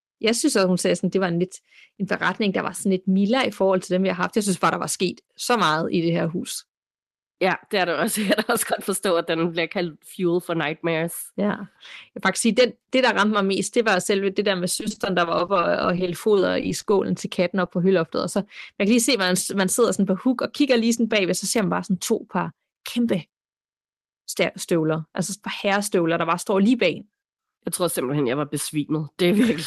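From 14.75 to 17.29 s there's repeated packet loss, giving that robotic sound. Dozens of short holes, each 20 ms at most, keep arriving, and the receiver papers over each one by stretching the last bit of audio. Around a third of a second gets patched this way, so the stretch comes out choppy.

Just after, between 17.65 and 17.67 s, there's one short concealed packet loss. About 10 ms never arrived in time and got filled by continuing the preceding sound, so you hear a quick smear or wobble before the real signal blends back in.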